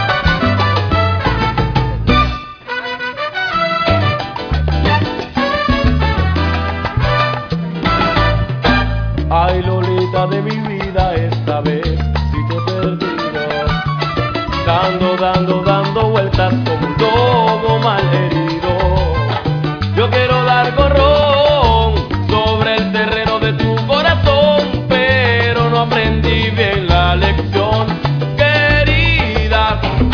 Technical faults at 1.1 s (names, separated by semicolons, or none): none